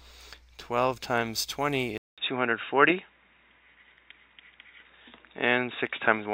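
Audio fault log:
1.98 s to the end, input switched to a poorer device: right after a gap of about 200 ms the sound turns dull and boxy, with nothing above 3.8 kHz, a modest jump in level, and a faint new hiss sitting well under the signal. It never recovers. That combination of a brief dropout, a narrower band and a different noise floor most likely means the recording jumped to another microphone or a headset's call mode partway through.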